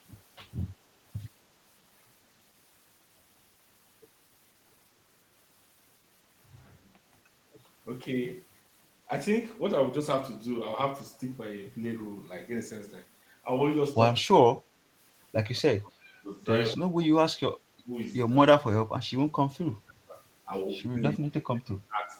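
At 6.90 to 7.02 s the background is gated by the echo canceller. The canceller heard loudspeaker output and pulled the microphone down. The room tone dips by about 7 dB for roughly a tenth of a second, then returns.

From 14.23 s the talker's speech is suppressed in double talk. It dips or cuts out at 14.23 to 14.66, 15.60 to 16.06, 16.24 to 16.30, 16.73 to 17.59, 17.82 to 17.93, 18.60 to 20.17 and 20.99 to 22.16 s. Drops range from slight to deep. The likely cause is the canceller mistaking the talker for echo while both sides spoke.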